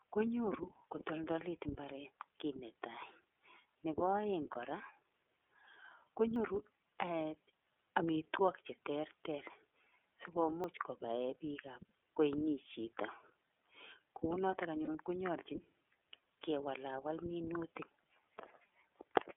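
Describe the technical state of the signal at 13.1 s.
At 13.1 s the speech carries iLBC codec damage, as it does throughout: each 30 ms frame is coded independently, leaving a plainly rough, synthetic sound that fits the 13.33 kbps mode. A spectrogram shows energy confined to 300 Hz to 3.5 kHz, empty above.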